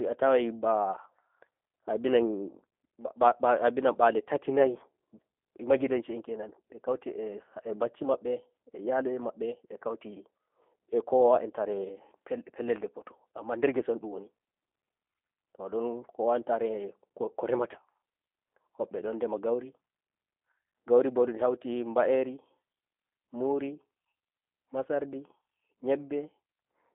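From start to finish, the speech carries the sound of the G.729 codec. Nothing above 3.5 kHz survives, and little below 250 Hz, so the voice sits in a narrow telephone band. The codec rebuilds each short frame from a vocal tract model, a pitch predictor and a few pulses, not the real waveform. That leaves the speech plainly rough and slightly synthetic. The texture fits a low bitrate near 8 kbit/s.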